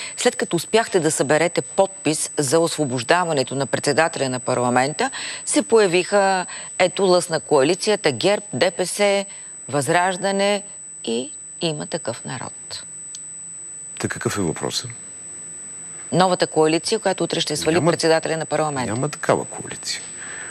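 A thin, steady whine at a fixed 8 kHz sits under the sound for the whole clip, high-pitched, and roughly 15 dB below the main signal. This is USB whine. The bus draws current in 125 microsecond microframes, and that ripple leaks into the audio path through shared power or ground, which fits the tone landing exactly at 8 kHz.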